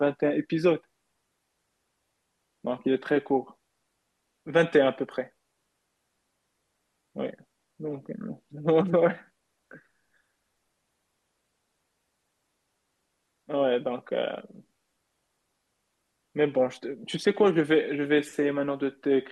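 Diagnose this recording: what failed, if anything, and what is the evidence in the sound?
Nothing failed; the speech shows no audible technical fault.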